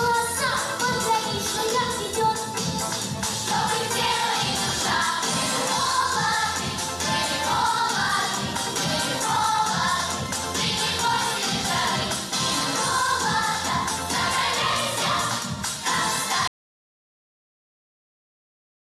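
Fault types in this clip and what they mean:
Audio dropout to silence: the input feeding the recorder was most likely lost, whether through a disconnected device, a failed link or an accidental mute, while recording carried on and wrote pure silence in its place. At 16.48 s the sound cuts off in mid-flow and never returns, leaving about 2.5 s of dead silence through to the end with no room tone underneath, so whatever happened in that stretch is missing.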